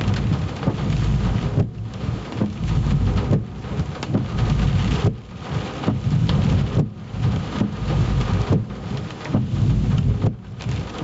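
A recording of non-speech sounds suffers from gain pumping for its whole length. The level drops sharply under each loud sound, swinging by around 15 dB. The likely cause is input gain set far too high, so a fast limiter or compressor keeps clamping down. On a waveform the envelope looks flattened, with loud and soft parts closer in level. The content stops at 8 kHz, which fits the wideband call path it came through.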